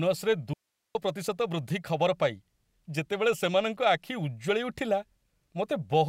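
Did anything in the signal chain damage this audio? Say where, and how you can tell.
Yes. An audio dropout to a faint residue runs from 0.54 s to 0.95 s. The speech cuts out abruptly for 0.41 s, leaving only hiss about 55 dB below the signal. The hiss shows the path stayed live, likely from a momentary break in the analogue input wiring.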